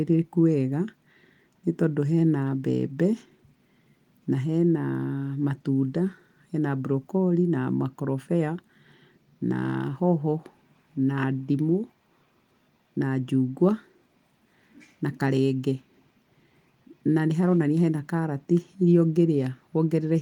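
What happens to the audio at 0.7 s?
Nothing goes wrong at 0.7 s: the speech there is intact, carried by Opus voice compression at 24 kbps in full band, which leaves only light coding damage.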